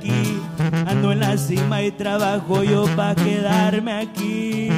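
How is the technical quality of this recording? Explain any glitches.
No technical glitches are audible.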